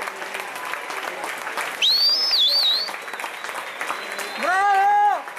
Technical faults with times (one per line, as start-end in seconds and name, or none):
none